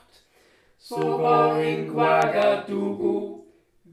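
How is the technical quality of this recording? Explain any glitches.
Two loud pops mar the recording. From 1.02 to 1.04 s a single pop stands about 5 dB above the audio. Between 2.22 and 2.44 s a louder double pop peaks roughly 10 dB higher. A voltage pulse, likely from a switch, plug or static, was added to the signal, and the following circuitry shaped it into a thump. Unlike a dropout, the underlying sound never stops.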